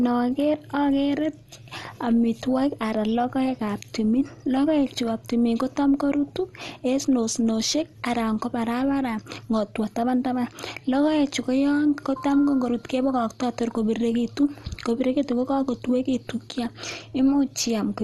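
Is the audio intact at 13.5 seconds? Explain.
No: MP2 compression damage runs throughout, 13.5 s included. Likely starved sub-bands leave nothing above 12.1 kHz, and coarse quantisation makes the speech dull, gurgling and granular.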